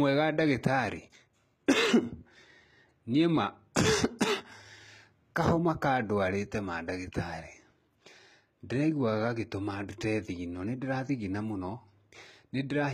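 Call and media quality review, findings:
HE-AAC compression, throughout the speech. Treble gritty and lispy on s sounds; harmonics above the crossover don't line up with the voice below. Likely cause: spectral band replication, with treble copied up from lower bands and shaped by a coarse envelope instead of coded. Damage plainly audible, which fits a low bitrate near 20 kbps, HE-AAC v2. No content above 14.8 kHz.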